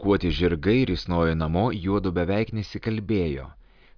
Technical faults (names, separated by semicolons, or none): none